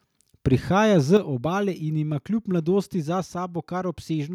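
At 0.46 to 0.54 s and again at 1.13 to 1.16 s, peaks turn harsh and crackly, likely microphone overload: about 2 dB too hot, flattening a few percent of samples, then roughly a tenth. Unlike codec distortion, the grit appears only on the loudest moments. Right after, at 1.17 s, the whole level drops by about 6 dB in one step, likely the microphone volume stepped down by software. Background falls too, so this is not the sound itself getting quieter.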